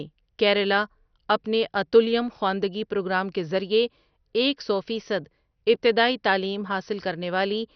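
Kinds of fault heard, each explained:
MP2 compression: The speech sounds dull and gurgling, with a coarse granular roughness throughout. This is likely MPEG Layer II coding starved of bits, which fits a low rate near 48 kbps. Without enough bits, the coder switches its upper sub-bands off entirely, so nothing remains above 6.2 kHz, and the bands it keeps are crudely quantised. A spectrogram shows a hard ceiling at 6.2 kHz with blocky, flickering patches beneath it. The waveform reveals little.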